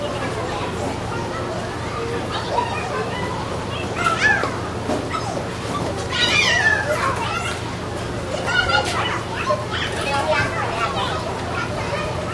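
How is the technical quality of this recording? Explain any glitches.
The recording has one fault running through all of it. Wrong sample rate: everything runs 1.5 times too fast and about 7 semitones high, which fits 16 kHz audio played back at 24 kHz. Because speed and pitch rise together, it is not a pitch shift or time-stretch.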